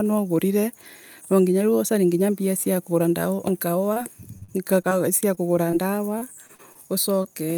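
At 3.93–3.98, 5.35–5.39, 5.71–5.75 and 7.23–7.26 s, short concealed packet loss: about 20 ms of speech never arrived and was patched. Each is a brief smear, with harmonics held flat on a spectrogram.

From 4.38 to 4.93 s and again from 6.19 to 6.77 s, repeated packet loss (robotic sound): four gaps each, up to 45 ms, are repeatedly patched. The result is choppy, with pieces missing, with stuttering, smeared frames in the waveform.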